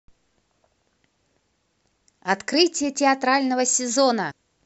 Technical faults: damaged data in a compressed stream

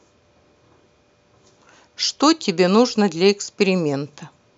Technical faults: none

